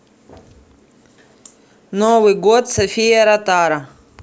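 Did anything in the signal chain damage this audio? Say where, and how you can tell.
No, nothing damaged this audio.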